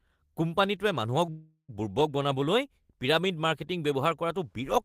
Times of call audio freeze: 1.30-1.71

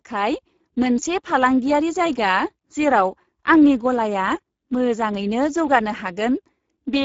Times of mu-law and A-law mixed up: none

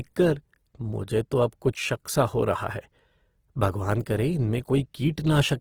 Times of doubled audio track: none

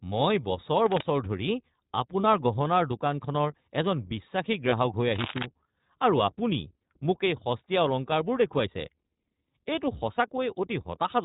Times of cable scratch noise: 5.15-5.46

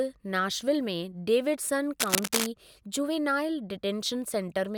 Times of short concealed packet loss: none

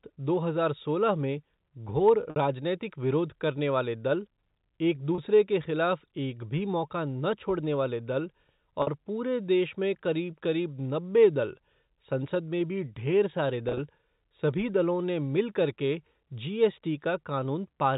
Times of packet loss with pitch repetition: 2.30-2.36, 5.15-5.18, 8.82-8.87, 13.69-13.79

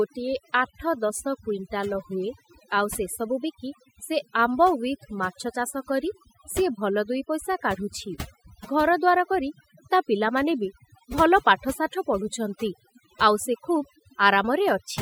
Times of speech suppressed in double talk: none

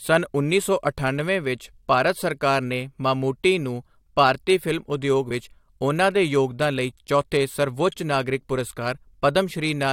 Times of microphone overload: none

